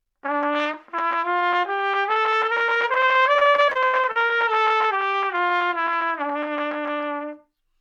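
From 3.33 to 4.31 s the audio breaks into repeated packet loss (robotic sound): about a dozen short holes, the longest about 78 ms, each patched by stretching the preceding sound. Unlike a single dropout, the rapid succession yields a choppy texture with pieces missing.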